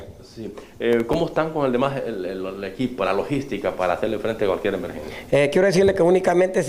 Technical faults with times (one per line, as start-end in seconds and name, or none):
0.93-1.30 processor overload crackle